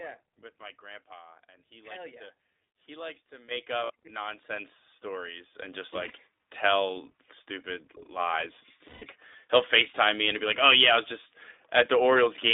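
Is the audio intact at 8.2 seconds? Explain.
No. At 8.19 s, just after "tell stupid", a microphone volume step-up occurs: the input gain was raised in one jump of about 4 dB, so the speech and the background noise both become abruptly louder together and stay at the higher level.

The same moment also carries iLBC codec damage, present throughout. Each 20 ms frame's excitation is coded independently, and the line band runs only from 300 Hz to 3.7 kHz, so the speech sounds muffled, slightly rough and synthetic, consistent with the 15.2 kbps mode.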